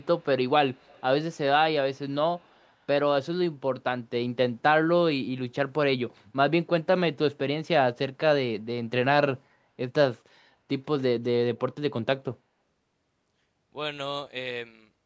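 Right at the start, from 0 to 0.25 s, then 0.73 to 1.02 s and 2.37 to 2.68 s, there's a faint echo leak: a copy of the speech trailing about 120 ms behind, roughly 30 to 40 dB down. Likely an echo canceller on a speakerphone letting some through.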